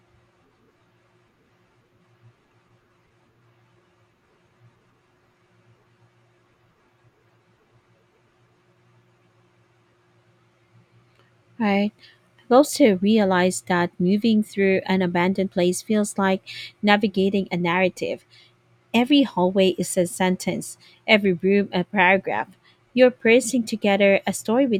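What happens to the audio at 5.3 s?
Nothing goes wrong at 5.3 s; the speech there is intact, with no dropout, click, distortion or other fault to be heard.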